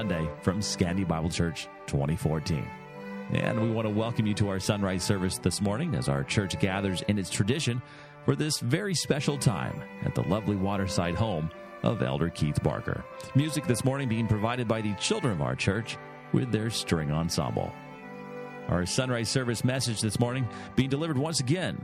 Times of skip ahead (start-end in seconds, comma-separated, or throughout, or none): none